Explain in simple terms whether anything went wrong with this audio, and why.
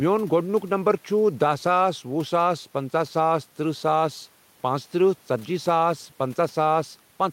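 Throughout, there is faint room noise in the background, and the loud and soft parts of the speech sit closer together in level, so the sound feels squashed. This is gain pumping, likely from the level being set too high, with an automatic limiter constantly pulling it back.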